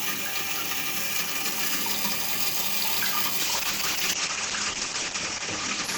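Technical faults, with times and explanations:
3.43–5.97 s: call bitrate drop, 96 to 9 kbps, bandwidth 20 kHz to 8 kHz, so the sound turns muffled and grainy, unlike clean low-pass filtering.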